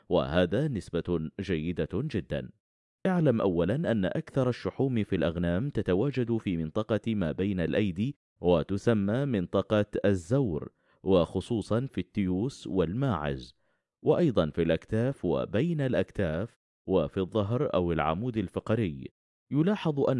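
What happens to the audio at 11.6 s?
Nothing goes wrong at 11.6 s: the audio there plays through intact, with no dropout, click, distortion or other audible fault.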